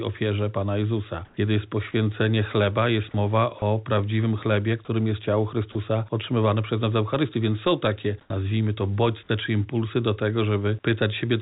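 At 1.25 s the sender most likely stopped transmitting during a pause and left the receiver to synthesise the background, which is comfort noise in place of the background. For 120 ms, until 1.37 s, the real background, which sits about 34 dB below the loudest passages, gives way to a smooth, featureless hiss about 2 dB louder than what surrounds it. The texture changes and then snaps back.

Between 5.72 and 5.75 s a brief stretch of real sound is replaced by steady noise. This is likely sound dropped by the voice detector: quiet material was judged to be background and not sent. About 20 ms of actual sound is lost inside a 30 ms gap, heard as a tiny flat-noise hole before the signal returns.

A second comfort-noise patch runs from 8.21 to 8.30 s, 90 ms long. The background here lies about 40 dB below the loud parts, and the synthetic fill sits about 12 dB lower still, so the room tone seems to vanish into near silence. 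The cause is likely the same discontinuous transmission.

That patch ends in an onset clipped by the voice detector, from 8.28 to 8.30 s. The detector was likely slow to register the returning sound, so its first 20 ms were never sent. The sound bursts in hard, with no soft attack.

Throughout, nothing is heard above 4 kHz, which points to narrowband G.711-style call coding.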